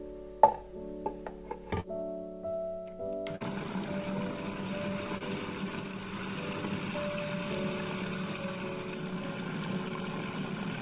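At 1.80–1.86 s, 5.18–5.22 s and 9.88–9.92 s there is short concealed packet loss: a few hundredths of a second never arrived in time, so the receiver extended the preceding sound and blended back, leaving a brief smear or wobble. At 3.36–3.42 s a burst of packet loss runs longer. The patched stretch dips into a held buzz or fading hiss, and the audio resumes slightly further on, with about 40 ms missing, all within a band that stops at 4 kHz, consistent with a narrowband G.711-type call codec.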